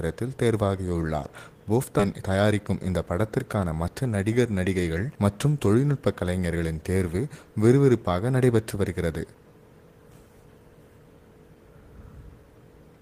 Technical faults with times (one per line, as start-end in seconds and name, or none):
1.99-2.01 skip ahead
2.13-3.04 jitter buffer speed-up